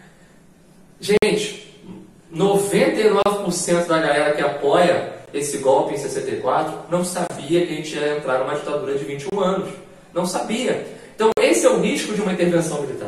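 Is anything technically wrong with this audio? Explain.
Yes. Gaps between stream segments occur at 1.17–1.23 s, 3.22–3.26 s, 5.26 s, 7.27–7.30 s, 9.30–9.32 s and 11.32–11.37 s, lasting 18 to 51 ms. Segment timestamps every 2.0 s leave small holes the player fills with silence, so hard-edged dropouts recur regularly without losing audio.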